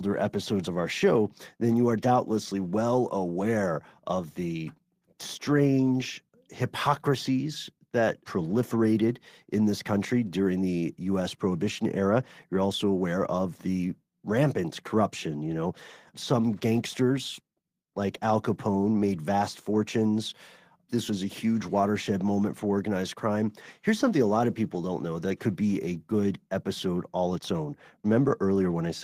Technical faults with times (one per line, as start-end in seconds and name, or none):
none